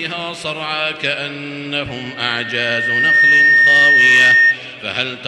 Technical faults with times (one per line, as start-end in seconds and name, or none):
1.87-4.59 loudspeaker feedback squeal